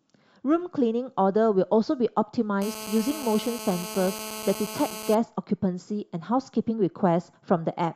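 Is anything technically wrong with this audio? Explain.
Yes. From 2.62 to 5.15 s a hard, raspy, harmonic-rich buzz runs steadily under the speech, about 12 dB below it. This is GSM phone buzz: a nearby 2G phone on a call transmits bursts about 217 times a second, and the audio circuitry rectifies those radio pulses.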